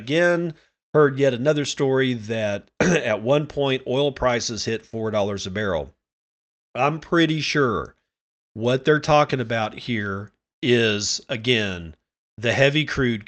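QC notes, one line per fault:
No faults logged; the speech carries the usual coding of a call path with audio band-limited near 8 kHz, which fits Opus at about 32 kbps.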